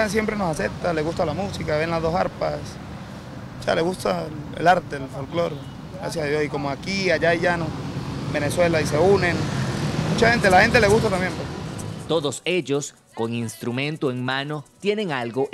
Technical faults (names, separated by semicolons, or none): none